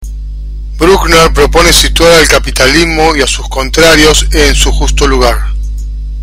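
From start to finish, the speech is driven about 18 dB past what a stage can pass, causing hard clipping: roughly a tenth of the waveform is flattened, adding harsh fuzz throughout.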